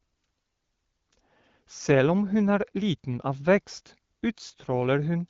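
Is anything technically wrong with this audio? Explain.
No, nothing stood out as technically wrong on listening to this speech clip.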